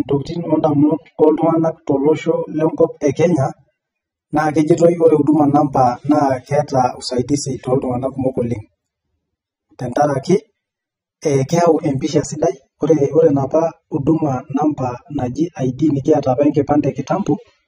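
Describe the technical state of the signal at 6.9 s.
At 6.9 s the speech carries the same AAC compression damage heard across the whole clip, and it's plainly audible. The top end is cut off and dull, with gaps in the spectrum, so sibilants come out fizzy and sustained sounds warble. The likely cause is an AAC-LC encode starved of bits, consistent with roughly 24 kbps, where the encoder lowers its bandwidth and drops or noise-fills bands it can't afford.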